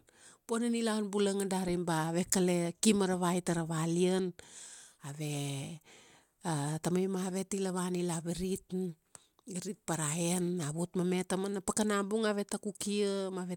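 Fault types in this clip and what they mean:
No technical faults can be heard in the speech, and the signal stays steady and continuous across the whole recording.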